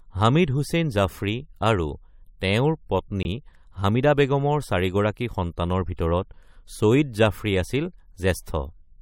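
At 3.23 s the speech drops into a corrupt frame muted gap lasting until 3.26 s: about 34 ms of silence, which fits one compressed frame that the decoder rejected. It cuts in abruptly, showing as a clean flat gap in the waveform and a vertical blank stripe across the spectrogram, with timing kept intact.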